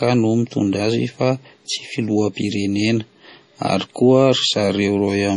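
Throughout, the speech sounds watery and swirly, with smeared attacks and nothing above 10.5 kHz, likely heavy MP3 compression pointing to a bitrate around 32 kbps.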